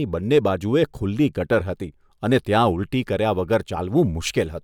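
At 0.34 to 0.38 s the speech hits hard clipping: for those few tens of milliseconds the level runs about 3 dB past what the signal chain can carry, so the waveform peaks are sliced flat. The squared-off tops throw energy into high harmonics, heard as a short, brittle crackle on the loudest part of the sound. Unlike soft saturation or a limiter, which round or pull down peaks smoothly, the distortion here is abrupt, edgy and confined to the peaks.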